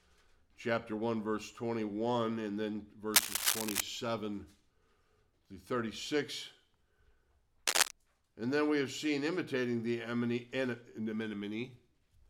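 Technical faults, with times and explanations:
3.14–3.81 s and 7.67–7.91 s, cable scratch noise: dense, ragged bursts of scratching sit around 5 dB above the sound, likely from a worn cable or connector shifting its contact resistance. A spectrogram shows broadband vertical smears; the waveform shows jagged, uneven spikes.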